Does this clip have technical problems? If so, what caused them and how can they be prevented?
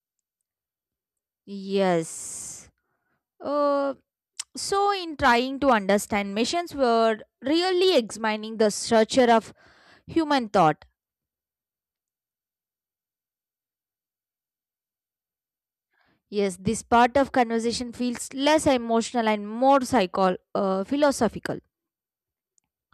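No, no technical problems here.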